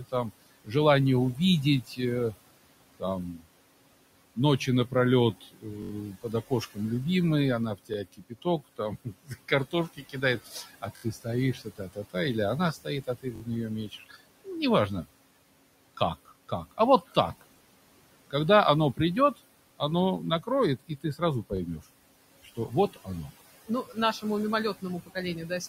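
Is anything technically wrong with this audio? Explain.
Yes. Three faults can be heard.

Noise suppressor artifacts run through the whole clip. The suppressor pulls the room noise down by about 21 dB wherever it judges the sound to be steady noise. That noise otherwise sits about 17 dB below the speech. The leftover noise sinks in the gaps and swells back under the speech.

Speech cut by the noise suppressor appears in three stretches: 0 to 6.8 s, 7.8 to 15.1 s, and 16.0 to 25.7 s. The suppressor mistakes quiet parts of the speech for noise and turns them down. The drops reach about 19, 22 and 20 dB. Roughly one and a half seconds are affected in the first stretch and about two seconds in the second. Those parts sound swallowed or faint.

A repeated buffer occurs five times: 5.82 to 5.91 s, 7.94 to 7.96 s, 10.97 to 11.03 s, 13.36 to 13.42 s, and 21.57 to 21.59 s. Each time, fresh audio arrived late and the device replayed the last 21 ms piece. 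That length fits a 1024-sample buffer. The piece plays up to four extra times. Each repeat ends at a hard join, so it is heard as a quick stutter or brief buzz.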